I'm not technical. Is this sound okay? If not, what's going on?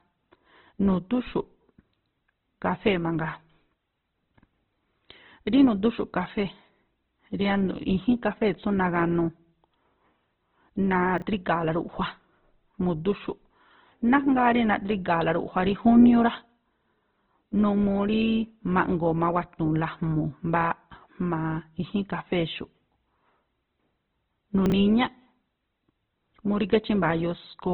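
No. The recording was likely squeezed hard by Opus compression, which discards everything above about 4.1 kHz, so the speech sounds muffled, rough and grainy throughout.

Chunks out of order also occur: a tiny 20 ms slice of audio played late, after the pieces meant to follow it. This causes a brief jumbled moment at 11.2 s and again at 24.7 s.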